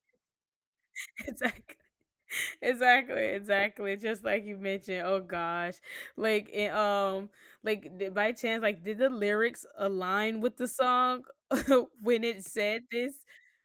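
Nothing in the speech stood out as a technical fault on listening.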